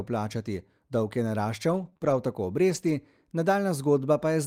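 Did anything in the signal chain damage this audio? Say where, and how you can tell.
Yes, at the network stage. From 1.69 to 2.92 s, just after "plačati dolg je", the speech shows scattered short gaps: about three brief holes, the longest around 30 ms, heard as small ticks and smears rather than silence. Lost or late packets left these holes, and the receiver's concealment covered each one by extending the preceding sound, hiding only a small share of that span. A buffer underrun would leave hard dropouts or clicks, not stretched, smeared fill.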